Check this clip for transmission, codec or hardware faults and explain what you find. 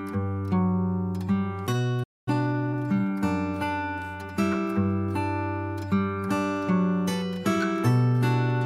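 Two faults appear, both playback-side: a brief stall and a hurried catch-up after it.

Playback stall, 2.03 to 2.28 s: the player was likely starved of data or had its output thread blocked, so nothing reached the output. The sound cuts out mid-flow into silence for about 233 ms, then resumes.

Time-compressed catch-up, 2.28 to 3.20 s: to clear the backlog built up during the stall, the player drops small slices and cross-fades the joins, running at 1.25 times speed. The audio sounds rushed but keeps its pitch.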